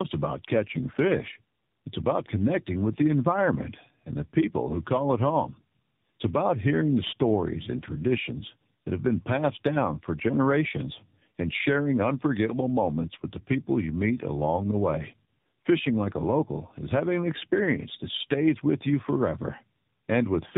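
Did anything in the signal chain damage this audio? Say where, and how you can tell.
Yes, at the codec stage: tandem speech coding throughout the clip. The call passed through two narrowband speech coders in a row, which fits an AMR-NB link, a G.711 mu-law hop, and a second AMR-NB link. The second coder re-encoded audio that the first had already degraded. Nothing survives above 3.8 kHz, so the speech sounds muffled, and the stacked coding errors give it a rough, warbly texture beyond what one narrowband codec alone would leave.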